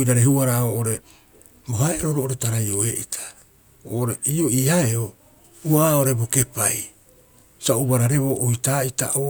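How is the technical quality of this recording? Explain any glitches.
Nothing technically wrong stood out on listening to this recording, so there are no glitches to explain.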